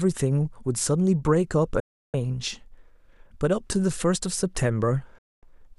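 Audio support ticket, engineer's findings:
Speech cuts to silence with a near-instant fade, about 3 ms, at 1.80–2.14 s (0.34 s) and 5.18–5.43 s (0.24 s). Digital broadcast dropout: receiver muting on lost or checksum-failed frames, consistent with 24 ms frames. Content in the gaps is unrecoverable.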